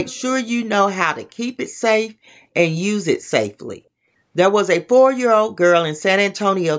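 From 0.04 to 0.22 s, a faint repeat of the speech trails it by about 246 ms. This is an echo leak, likely from a far-end loudspeaker's canceller letting pickup through. Unlike room reverberation, it is a distinct delayed copy rather than a smeared tail.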